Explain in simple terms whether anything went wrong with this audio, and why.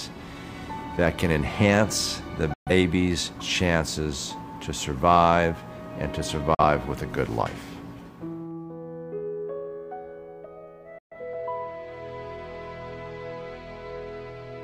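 A digital broadcast dropout silences the sound three times, at 2.54, 6.55 and 10.98 s. Each gap lasts about an eighth of a second, the middle one only about 40 ms. Unlike a crackle, it is a clean, quick mute while the receiver waits for good data.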